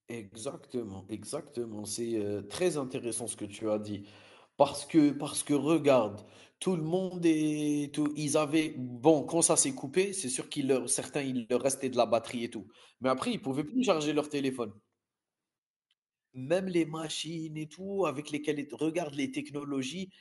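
At 8.06 to 8.08 s a single loud pop lands on top of the speech, peaking well above it, likely from a sudden voltage step such as a switch or static discharge. Unlike a dropout, the speech carries on unbroken underneath the brief thump.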